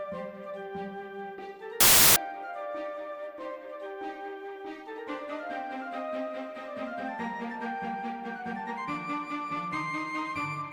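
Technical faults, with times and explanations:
1.80–2.16 s, wrong sample width: packed 24-bit samples read as 32-bit produce loud noise with the sound buried inside, sped up 1.33 times, unlike byte-swap noise at correct speed.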